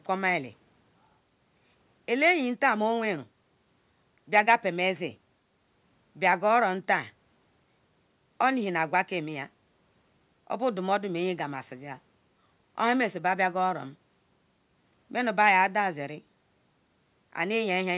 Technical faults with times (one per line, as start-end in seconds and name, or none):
none